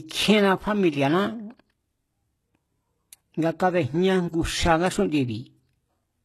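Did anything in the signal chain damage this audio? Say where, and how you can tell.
Yes, at the codec stage, and throughout the clip. The speech has the gritty, lisping treble that points to HE-AAC compression at a very low bitrate, consistent with about 16 kbps. The top end is most likely rebuilt by spectral band replication: lower bands are copied upward under a coarse envelope, so sibilants sound metallic and their harmonics don't line up. A spectrogram would show blocky, patched-looking treble that stops dead at 12.3 kHz.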